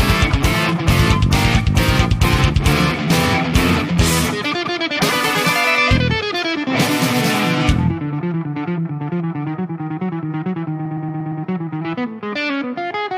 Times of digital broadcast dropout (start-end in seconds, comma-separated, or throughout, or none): none